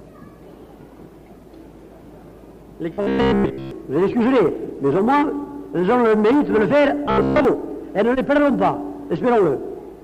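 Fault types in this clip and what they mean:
Robotic sound from repeated short buffers: twice the sound turns into a rigid metallic buzz near 67 Hz, likely from a 15 ms buffer looped over mostly skipped audio.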